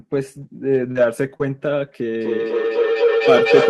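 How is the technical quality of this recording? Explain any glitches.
The recording has clear technical problems: brief packet-loss damage early on, then a feedback howl that takes over the final stretch.

Lost packets rebuilt from error correction occur at 0.75–0.77 s, 0.95–0.97 s and 1.40–1.42 s. Each time a packet went missing, the next packet's low-bitrate backup copy was decoded instead, so there is no gap, but each 20 ms patch sounds rougher and noisier.

Short concealed packet loss occurs at 0.91–0.97 s and 1.38–1.42 s. Here audio arrived too late for the decoder, which invented a replacement by extending the preceding sound before blending back. About 40 ms and 20 ms are filled, heard as a brief smear or wobble.

Feedback howl runs from 2.20 s to the end. A microphone was picking up a loudspeaker on the same call, and the loop grew louder with each pass. The result is a tone around 500 Hz, peaking about 2 dB above the speech and pulsing roughly every third of a second.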